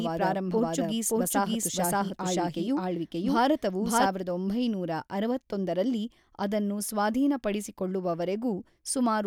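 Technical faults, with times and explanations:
0.00–4.06 s, doubled audio track: the speech is already running twice when the clip opens, with a second full-band copy trailing about half a second behind at roughly the same loudness, so every syllable is followed by a clean repeat with no reverberant tail. This is likely a second capture through a slower path mixed back in. On a spectrogram, each speech pattern appears twice, offset in time; the waveform shows overlapping bursts until the copy stops abruptly at 4.06 s.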